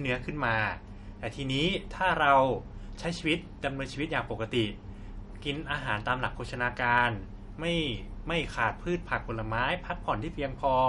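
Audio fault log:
throughout, MP3 compression: the speech sounds watery and swirly, with plainly audible codec damage and nothing above 11.1 kHz. The likely cause is MP3 encoding at a low bitrate, around 50 kbps, which cuts the treble and lets weak frequency components flicker between frames.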